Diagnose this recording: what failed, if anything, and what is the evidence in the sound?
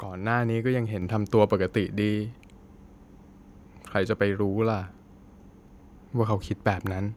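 Microphone volume stepped up at 1.02 s, a fault in the call processing stage. The speech and the background noise floor jump together by about 5 dB in a single step, and the new level then holds. Because both rise by the same amount at once, the change points to the input gain rather than the talker. The call software judged the microphone too quiet and raised the device's input volume in one increment instead of ramping it smoothly.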